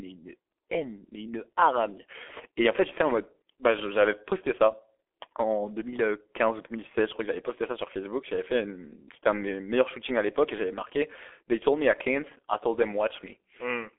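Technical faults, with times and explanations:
Throughout, G.723.1 codec: the speech passed through a very low-rate telephony coder, with heavy damage consistent with a bitrate of roughly 6 kbit/s. The coder works in 30 ms frames and refits its vocal-tract model only once per frame, so fast changes get smeared, and it confines the signal to a 300 to 3400 Hz telephone band with nothing above 3.6 kHz. The speech therefore sounds muffled and hoarse, and consonants come out blurred.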